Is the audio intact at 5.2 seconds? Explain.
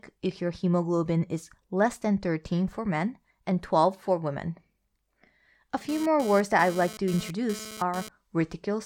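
Yes, the speech at 5.2 seconds is intact, with no audible technical fault at that moment.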